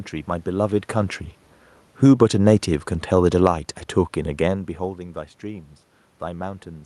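From 1.88 to 3.6 s the level sinks by about 5 dB as the automatic gain falls: the gain control judged the input too loud or its background noise too strong and eased its gain down over those 1.7 seconds. The room noise drops along with the speech, which separates this from the talker moving near 0.5 s and 4.0 s. In those moments only the voice changes level, while the background stays steady.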